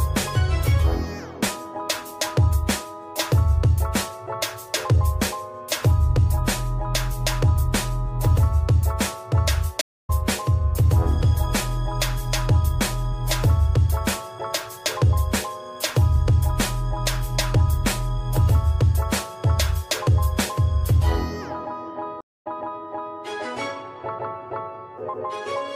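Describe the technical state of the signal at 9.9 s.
At 9.9 s you're inside a stream reconnect running from 9.81 to 10.1 s. The connection dropped, so there's about 223 ms of dead silence. Then a fresh decoder picks up mid-stream roughly a fifth of a second further on, so that bit of audio is simply skipped.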